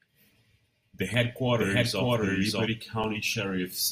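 Twice in this speech clip the output buffer ran empty and the converter held its last sample until data came back, an underrun with held sample. At 1.14 s the waveform freezes flat for about 1.2 ms, and at 3.03 s for about 5 ms. Roughly a millisecond and then a few milliseconds of live audio went missing during those stalls. Between 1.55 s and 2.67 s there is a doubled audio track, most likely the same signal captured a second time by a slower path. A full-band copy trails the original by around 0.7 s at roughly equal loudness, with no decay or room colour, so it reads as a second overlapping layer of the same speech rather than an echo. It starts and stops abruptly at those two times.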